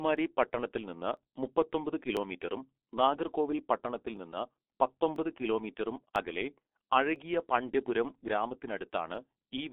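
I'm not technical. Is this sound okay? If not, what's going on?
No. The speech went through the G.723.1 codec, an old internet-phone format that removes everything above about 3.8 kHz, leaving it muffled and hoarse with smeared consonants, unlike simple low-volume recording. There are also periodic USB or driver dropouts: a tiny sliver of audio is skipped about once every second, from 0.17 to 9.15 s, heard as evenly spaced ticks rather than random crackle.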